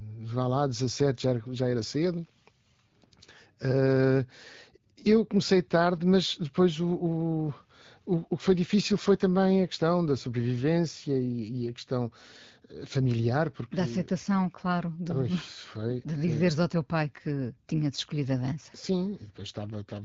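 Nothing goes wrong anywhere in this speech clip, which simply sounds like an ordinary AMR wideband (HD Voice) call at about 12.65 kbit/s, with the light coding character you'd expect at that rate.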